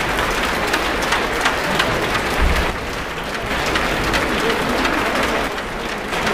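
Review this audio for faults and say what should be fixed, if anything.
One channel drops out at 2.70 to 3.50 s and 5.48 to 6.12 s: the level falls abruptly by about 6 dB, likely because one stereo side is lost before the mono sum. To prevent it, check the cabling, connectors and channel routing on both sides of the stereo feed.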